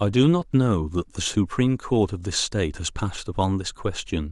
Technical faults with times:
0.53 overlap between stream segments

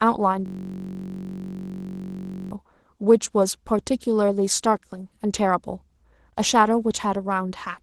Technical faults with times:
0.00-7.82 Opus voice compression
0.46-2.51 system hang loop

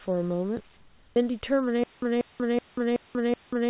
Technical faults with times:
0.77-1.16 comfort noise in place of the background
1.84-3.70 stutter with silent gaps

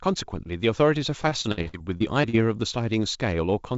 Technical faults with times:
1.22-2.46 repeated packet loss (robotic sound)

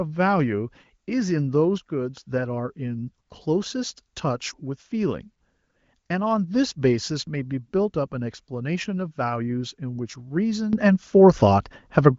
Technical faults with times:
1.78-2.23 sudden gain jump
10.73-12.19 sudden gain jump

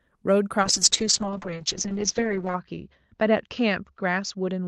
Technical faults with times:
0.62-4.67 call bitrate drop

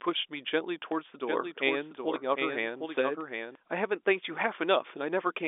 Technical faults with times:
0.92 dropped buffer (overrun)
1.28-3.55 doubled audio track
2.97 dropped buffer (overrun)

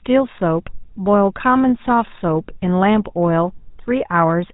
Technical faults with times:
0.00-4.53 GSM full-rate codec

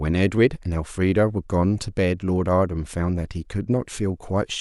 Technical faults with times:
none

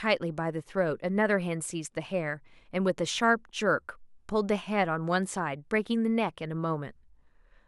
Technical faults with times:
none

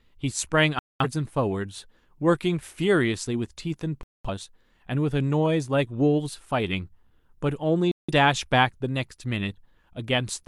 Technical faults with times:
0.79-1.05 digital broadcast dropout
4.03-4.29 digital broadcast dropout
7.91-8.13 digital broadcast dropout

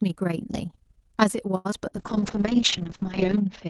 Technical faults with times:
0.00-3.70 overlap-add ripple
1.57-1.67 short stall from a late packet
1.71-1.93 short concealed packet loss
1.99-3.70 call bitrate drop
2.20-2.80 jitter buffer slow-down

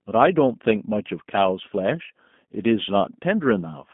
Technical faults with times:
0.00-3.93 G.729 codec

